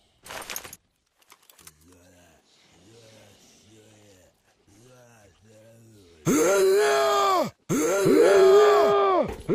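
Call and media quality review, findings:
Doubled audio track, 7.69 s to end: full-band second copy cuts in abruptly, trailing about 1.5 s behind, roughly 5 dB down, no decay or room colour. Likely a slower second capture path or an edit holding two offset copies.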